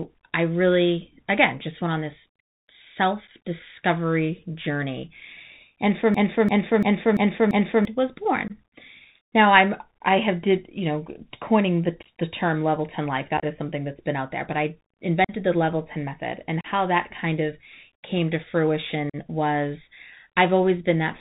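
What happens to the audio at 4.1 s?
Bluetooth CVSD headset codec damage is present at 4.1 s, as it is across the whole speech clip. The codec sends a single bit per sample, saying only whether the waveform should step up or down, with a step size that adapts. That fits a 64 kbps headset link. Nothing above 4 kHz survives. Loud high-frequency sounds outrun the step and distort, s sounds come out scratchy, and a granular hiss sits beneath the speech.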